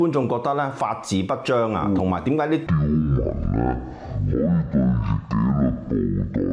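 From 2.67 s to the end at 6.52 s, the audio suffers a wrong sample rate fault: it plays at half speed and a full octave (12 semitones) lower, which points to 44.1 kHz material read out at about 22 kHz. On a spectrogram all content drops to half its frequency, leaving the upper band empty. The waveform stretches to twice its length.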